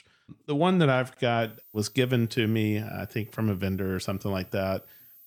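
A switching supply whistle enters at 1.42 s, just after "one that I've", and continues to the end of the clip. It is a thin, high tone at about 15 kHz, wandering between 14.37 and 14.54 kHz, sitting roughly 25 dB below the speech. The whistle arises because a switching power supply is either running in a burst mode slow enough to fall within hearing or beating against another supply, and the pitch drifts as its load changes.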